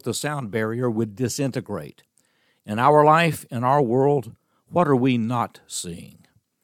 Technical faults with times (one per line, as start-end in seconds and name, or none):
none